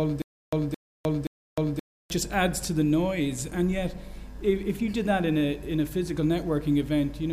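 Stutter with silent gaps runs from 0.0 to 2.1 s: a 218 ms burst returns three times every 525 ms with 307 ms of digital silence between, likely a stalled stream replaying its last fragment.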